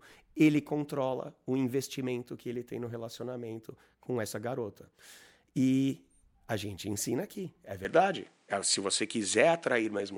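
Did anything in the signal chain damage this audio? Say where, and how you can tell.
Yes. At 7.85 s the speech changes character and stays that way to the end: nothing above about 10.5 kHz survives, the level shifts by roughly 5 dB, and a new noise floor appears, sitting about 45 dB under the speech. There's no gap at the changeover, just an instant jump in tone. That's the classic sound of an input switched to a poorer device, likely the capture stage handing over to a different, narrower-band microphone with its own noise and gain.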